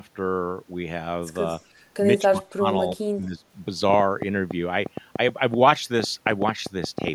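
From 1.51 to 1.64 s there is an echo leak: a faint, delayed copy of the speech, lagging the original by 226 ms and sitting around 30 dB below it. The far end is likely on a loudspeaker, with its echo canceller letting a scrap of the pickup return. The fixed, distinct lag sets it apart from room reverberation, which smears continuously rather than repeating as a separate, detached copy.

Between 2.24 and 2.65 s the speech is suppressed in double talk. The level sinks by roughly 25 dB over nearly half a second. Shorter, shallower dips of roughly 15 dB follow at 2.94 to 2.99 s and 3.17 to 3.44 s. The likely cause is an echo canceller that could not separate this talker from loudspeaker echo while both sides spoke, so it turned both down.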